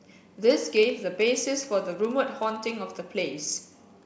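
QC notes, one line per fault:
Throughout, block size mismatch (padded): a short run of zeros lands in every block the next stage reads, so the speech carries a low buzz at about 15.6 Hz, the rate of the inserted gaps, which fits a 1024-sample read block at 16 kHz. The writing stage falls only slightly short of each block, so the padding adds very little time: playback runs at 0.999 of normal speed.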